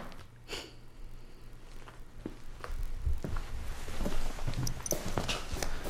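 From the start to about 3.27 s the sound carries a steady buzz at 43.1 Hz, with pitch and pace essentially unchanged (0.999 times normal speed). This is a block size mismatch (padded): each block a stage writes falls slightly short of the roughly 1024-sample block the next stage reads, and zeros fill the remainder.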